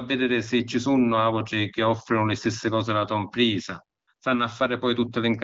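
At 3.99 s the phone's voice activity detection judged the talker silent and stopped sending speech frames for 80 ms, and again at 4.13 s for 60 ms. Each time the receiver filled the gap with AMR comfort noise, synthesised from a rough description of background level and spectrum. The real background gives way to a brief, smooth, steady hiss that switches in and out.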